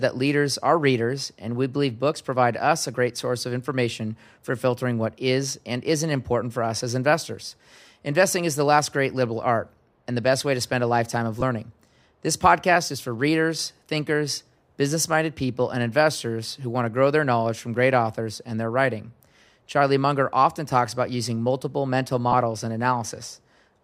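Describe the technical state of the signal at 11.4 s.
At 11.4 s, right after "spend a lifetime of", there's a short burst of lost LE Audio frames, about 15 ms, which fits two dropped frames. The decoder fills the gap by reusing the last spectrum with random signs, so it comes across as a brief noisy smear.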